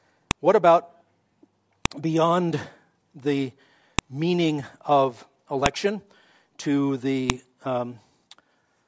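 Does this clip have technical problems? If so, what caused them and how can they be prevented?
Yes. A file header played as audio causes sharp, loud clicks in this speech at 0.31, 1.86 (just before "beyond the meaning of"), 3.99 (between "beyond the" and "meaning of"), 5.66 (right after "beyond the meaning of") and 7.30 s. Each snap lasts one to two milliseconds and marks a join where a WAV piece's header bytes were left in and decoded as samples. To prevent this, strip each header before concatenating or streaming the pieces.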